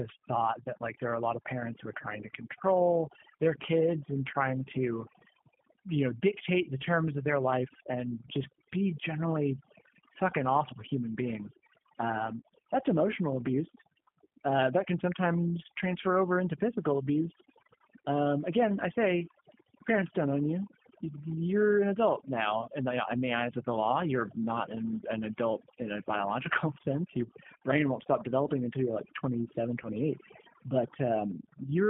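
A speech recording with heavy, overdone noise removal throughout. The background drops away, broken by twinkling, metallic specks where isolated frequency bands slip past the suppressor. The quieter parts of the voice are pulled down with the noise. The whole clip has also passed through the G.729 codec at 8 kbit/s, limited to a telephone band of roughly 150 Hz to 3.4 kHz. The damage is plainly audible: the speech is rebuilt from a vocal tract model and a sparse pulse excitation, so it comes across as rough and slightly synthetic, with nothing bright above the band edge. At 29.83 to 29.89 s, VoIP packet loss concealed by the speech codec shows up as a brief distorted patch. This fits a single lost 10 ms frame. The decoder extrapolated from its last pitch and filter state, and because each following frame builds on that guess, the distortion lingers past the lost frame before the voice settles.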